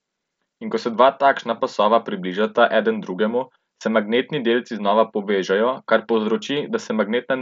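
The clip is speech, and nothing is technically wrong with it.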